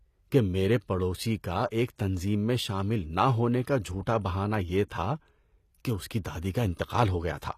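Throughout the speech, the treble sounds rebuilt rather than recorded. This is likely HE-AAC compression, and the damage is plainly audible. The upper bands are copied up from lower ones, so s sounds turn gritty and metallic. Nothing is present above 14.9 kHz. The sound points to a low bitrate near 24 kbps.

At 4.89 s, just after "کا جھوٹا بہانہ یہ", there is pre-echo. The codec spread its quantisation noise across the whole block, including the quiet moment before a sharp attack. A brief hiss of about 14 ms comes first, and the onset sounds smeared.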